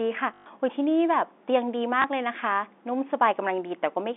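At 0.34 to 0.46 s there is packet loss with the last packet repeated: for 120 ms the receiver replays the same short block instead of new audio, consistent with six lost 20 ms packets. The loops buzz at about 50 Hz, a brief robotic stutter. A second, single 20 ms repeat at 2.02 to 2.04 s gives a small blip. The G.711 telephone band, roughly 250 Hz to 3.6 kHz, is audible throughout.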